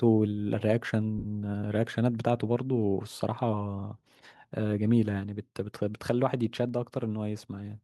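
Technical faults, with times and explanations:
1.18 to 1.25 s, lost LE Audio frames: about 60 ms of the Bluetooth stream goes missing, and the LC3 decoder fills the gap by replaying the last spectrum with scrambled phase. The sound smears into a brief noisy blur and starts fading before the signal returns.
2.55 s, microphone volume stepped down: the speech and the background both drop in one step, by about 2 dB. This is likely the call software deciding the mic was running hot and pulling the device's input gain down in one go.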